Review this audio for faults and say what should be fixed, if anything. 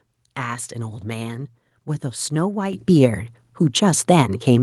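At 2.73 s the microphone volume stepped up by about 8 dB, as automatic input-gain control raised the device level in one jump, lifting voice and background together. Disabling automatic microphone gain adjustment in the call software prevents this.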